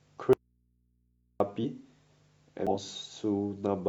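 At 0.33 s the speech cuts out abruptly and returns at 1.40 s, about 1.07 s later. This is an audio dropout to a faint residue: the gap holds mains hum roughly 45 dB below the speech. The likely cause is a signal lost while the input stayed live. Unlike a pause or fade, it stops and restarts with no taper.

Compressed frames are skipped at 1.60 to 1.64 s and again at 2.67 to 2.74 s, jumping ahead by roughly 100 ms and 150 ms of audio.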